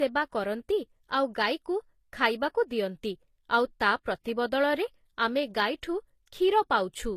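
From start to finish the speech carries a layered coding texture: the first codec's artefacts sit alongside the second codec's own artefacts, with content reaching about 20.3 kHz. This is likely transcoding between lossy codecs, which fits a Vorbis encode near 64 kbit/s followed by HE-AAC near 24 kbit/s. The second encoder spends its scarce bits reproducing the first one's artefacts and then adds its own, so both sets are heard together.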